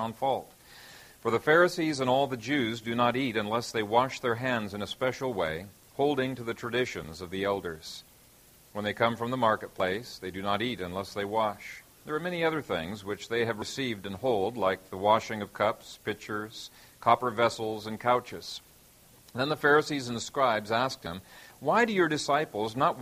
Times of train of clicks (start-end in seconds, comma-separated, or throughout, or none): none